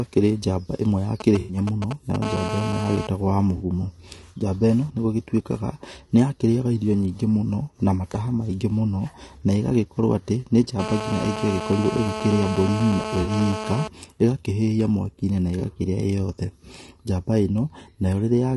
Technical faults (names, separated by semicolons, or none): low-delay AAC compression; GSM signalling bursts; AAC frame loss with concealment; GSM phone buzz